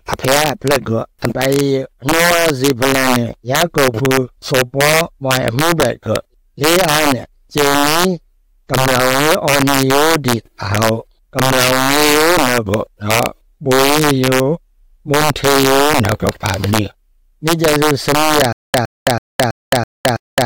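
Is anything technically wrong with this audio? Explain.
Yes, there are two faults.

Integer overflow runs through the whole clip. The signal is driven about 3 dB past the largest value the integer format can hold, and instead of being limited at that ceiling, the samples that exceed it wrap around to the opposite extreme. Only a small share of samples, around 2 percent, cross the limit, but each one jumps across the full range, so the loudest moments break into harsh, violent cracks that are far sharper than ordinary clipping.

A stutter with silent gaps starts at 18.53 s and continues to the end at 20.45 s. This is likely a playback or streaming stall, where each retry replays the last buffered fragment and then runs dry. The result is a burst of about 114 ms repeating six times at a steady 328 ms period, with about 214 ms of digital silence between repeats. Whatever audio should have followed in those final two seconds is missing.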